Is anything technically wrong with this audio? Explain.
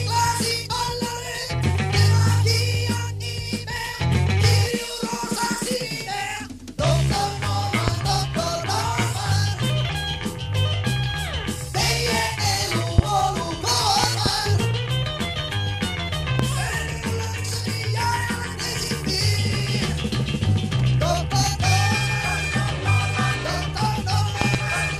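Yes. Loud pops occur at 7.88–7.91 s, 12.98–13.01 s, 16.39–16.42 s, and as double pops at 14.04–14.29 s and 24.42–24.57 s. A sudden voltage step, likely from static, a switch or a driver glitch, lands on the signal as sharp thumps roughly 20 dB above the sound (around 15 dB at 16.39 s) while the sound continues beneath.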